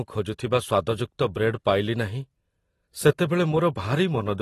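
Throughout, the speech has likely passed through low-bitrate AAC compression, consistent with roughly 32 kbps, leaving nothing above 12.5 kHz and a dull, smeared, fizzy sibilance.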